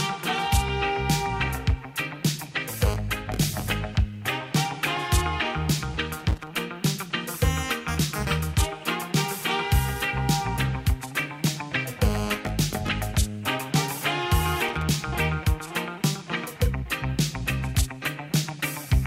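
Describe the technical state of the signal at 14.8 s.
At 14.8 s the signal has loose connector crackle. It runs from 14.69 to 14.83 s. A worn or dirty contact is making and breaking rapidly, chopping the signal on and off. The result is a short, irregular burst of scratchy crackle over the sound.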